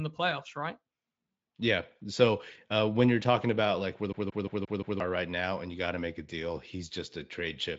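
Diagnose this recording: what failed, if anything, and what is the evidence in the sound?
Playback: a CD stuck on one turn, its laser jumping back a track, replays one 175 ms slice five times from 4.13 to 5.00 s, showing identical waveform blocks split by brief mutes.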